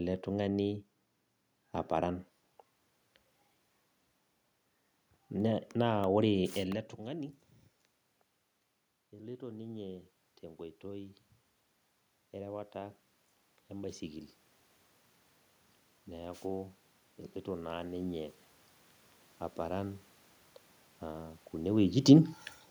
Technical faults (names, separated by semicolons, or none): automatic gain rising